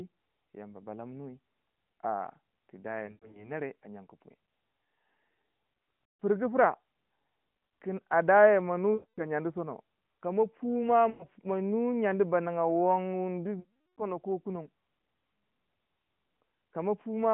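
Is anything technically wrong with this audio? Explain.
Yes, there are lost AMR speech frames in five spots: 3.06 to 3.52 s, 6.04 to 6.22 s, 8.94 to 9.23 s, 11.10 to 11.26 s, and 13.60 to 14.07 s, the longest at about 380 ms. Corrupted frames fail their check, so the decoder keeps replaying the last good pitch and vocal-tract shape at shrinking gain. You hear the sound smear out and sag toward silence, then come back a bit thin. The narrowband AMR codec underneath sounds only lightly coloured.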